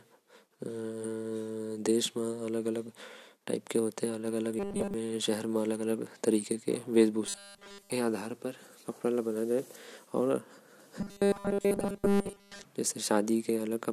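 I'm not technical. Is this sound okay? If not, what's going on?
No. The speech turns into a flat, metallic buzz three times: 4.59 to 4.94 s, 7.26 to 7.90 s, and 11.01 to 12.65 s. This is robotic sound from repeated short buffers. The likely cause is audio arriving too slowly, so the player loops the last 5 ms it received. That fixed loop gives a steady 200 Hz drone, heavy in the first stretch and total in the later two. Unlike a dropout, the sound never goes silent.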